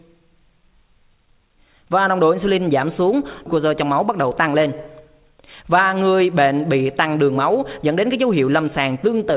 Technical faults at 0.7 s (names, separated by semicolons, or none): none